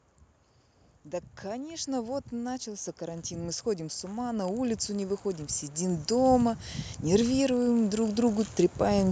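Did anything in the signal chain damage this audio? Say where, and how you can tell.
Yes. The call processing stage is the culprit: automatic gain rising. From about 1.41 s the level starts creeping up and keeps climbing right through to 9.07 s, ending roughly 17 dB louder, about 17 dB hotter. The speech and the background noise swell together, which gives it away. The AGC decided the input was too quiet and kept ramping its gain over those seven-odd seconds.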